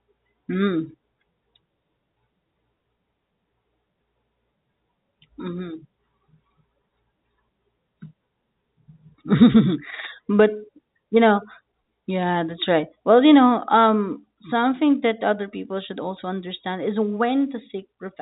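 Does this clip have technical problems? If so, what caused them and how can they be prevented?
No, the speech carries the narrow sound of an ordinary G.711 telephone path, consistent with 64 kbps mu-law coding, with nothing above about 3.8 kHz, and no problem stands out beyond that expected telephone character.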